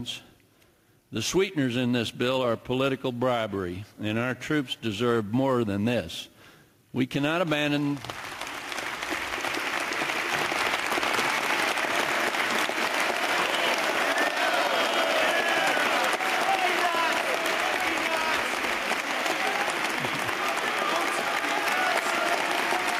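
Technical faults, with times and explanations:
Throughout: gain pumping. The level swings by around 5 dB, so loud and soft parts sit close in level and the sound feels squashed. Likely cause: input gain set far too high, with a fast limiter clamping down on each peak.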